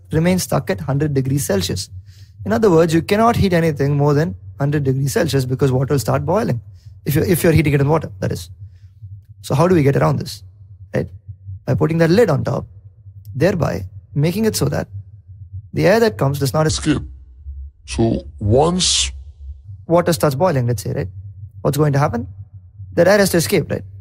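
From 16.69 s to 19.64 s, a section at the wrong speed was likely played back against the wrong clock, running at 0.7 times its recorded rate. The sound there drags noticeably and sinks by roughly seven semitones, then returns abruptly to normal pace.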